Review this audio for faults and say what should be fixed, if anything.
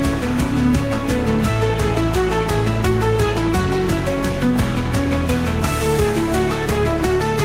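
Nothing stood out on listening, so there is nothing here that needs fixing.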